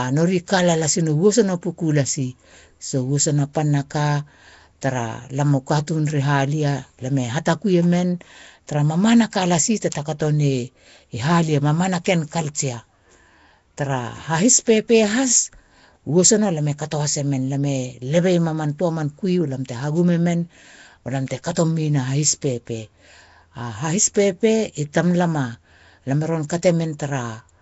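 Nellymoser compression runs throughout the speech, plainly audible as a rough, hissy halo and a smeared, underwater quality, with nothing above 7.7 kHz. The likely cause is the Nellymoser Asao codec at a rate fitting 32 kbps, filling starved weak bands with noise.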